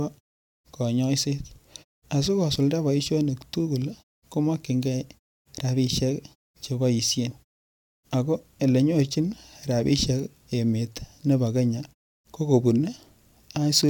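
No technical faults can be heard in this speech.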